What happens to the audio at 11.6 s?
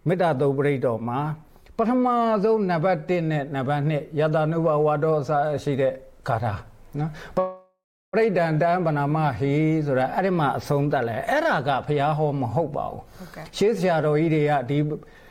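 Nothing goes wrong at 11.6 s; the audio plays through that moment without any audible fault.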